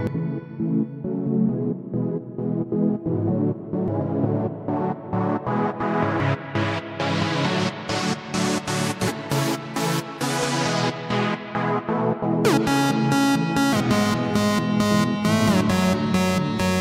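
Short chirps or squawky blips break into the audio at 0.07, 3.88, 6.20, 9.08 and 13.73 s. This is damaged data in a compressed stream: corrupted bytes make the decoder misread those frames and lose sync until it locks onto the next valid frame header.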